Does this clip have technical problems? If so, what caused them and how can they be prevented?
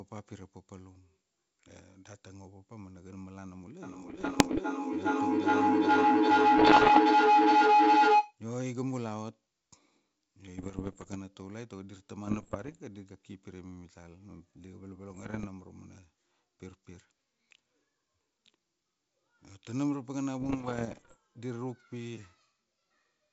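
Yes. A feedback howl runs from 3.82 to 8.4 s. Two devices on the call share a room, so each microphone-to-loudspeaker trip adds gain. A tone near 1 kHz rises about 15 dB above the speech, with a loop delay of roughly 0.4 s. On a spectrogram it appears as a bright horizontal line. To prevent it, keep the devices apart or mute all but one.

Bit errors on an ADPCM link cause rough bursts at 4.08–4.61, 6.58–6.99, 10.58–11.17, 12.25–12.78, 15.10–15.47 and 20.40–21.16 s. Flipped bits, at around 1 to 1.5 percent, throw off the decoder's step size and predictor, so each error rings on briefly. The waveform shows spiky pops and sudden level jumps, and the spectrogram shows broadband vertical streaks. A cleaner link or error protection would prevent them.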